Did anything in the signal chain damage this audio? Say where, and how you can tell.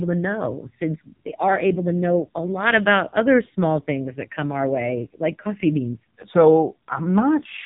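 Yes: the AMR narrowband mobile codec damaged this speech clip throughout, at the codec stage. Nothing above 3.8 kHz survives, so sibilants and breath lose their top and the voice sounds boxed in. The heavy damage points to one of the lowest modes, near 6 kbps: the vocal-tract model gets too few pulses per subframe to rebuild the excitation, which leaves a buzzy, synthetic edge on every voiced stretch.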